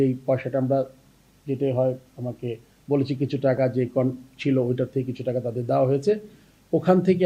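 At 3.57 s, compressed frames are skipped: the decoder drops what sounds like a single 10 ms frame, so the audio jumps ahead.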